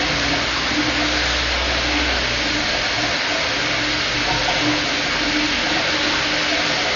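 Throughout, the sound is dull, with nothing above 6.9 kHz. Rough, fluttering noise clings to tones. This heavy damage is likely Dolby Digital compression, fitting roughly 48 kbps.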